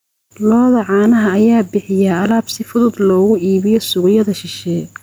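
A short speech recording with gain pumping throughout. Loud and soft parts sit closer in level, and the sound is squashed. The level swing is around 5 dB. The likely cause is input gain set far too high, with a fast limiter clamping down on every loud sound.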